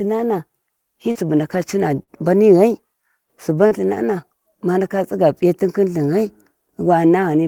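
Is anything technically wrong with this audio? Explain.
Yes, there's short concealed packet loss at 1.11 to 1.18 s, 2.03 to 2.10 s and 3.67 to 3.74 s: about 40 ms of audio goes missing each time. The receiver patches each gap by extending the last sound, so you hear a quick smear or wobble.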